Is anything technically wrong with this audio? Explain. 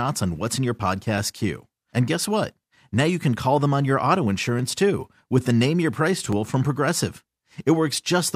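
Yes. Three sharp clicks break the speech at 1.18 s, 4.59 s after "them on your auto", and 6.33 s. Each is likely dropped samples. Under a millisecond goes missing, so the waveform jumps abruptly. Nothing audible is lost, only a brief tick.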